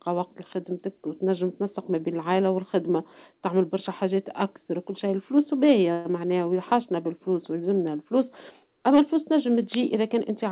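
From 5.92 to 6.07 s the speech stalls into a brief fading buzz or hiss lasting about 129 ms, then resumes intact but later. This is a call audio freeze, likely from delayed packets draining the jitter buffer. The sound has nothing above 4 kHz, which fits G.711 A-law.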